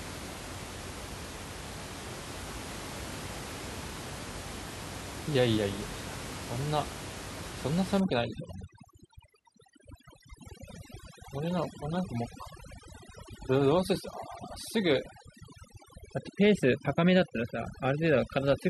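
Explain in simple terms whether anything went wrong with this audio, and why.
From 8.0 s to the end at 18.7 s, the background drops and breaks up into twinkling, warbling specks. This is overdone noise removal: a cleanup tool set too strong, stripping away quiet parts of the speech along with the room noise heard earlier.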